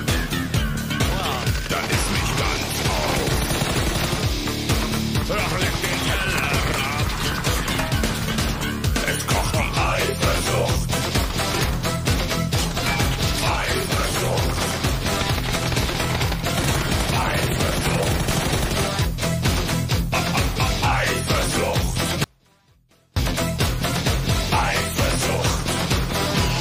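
From 22.24 to 23.17 s the sound abruptly drops away for about 0.92 s, leaving only a faint leak roughly 35 dB below normal level before snapping back. This audio dropout to a faint residue likely comes from a momentary signal loss while the downstream path stayed live.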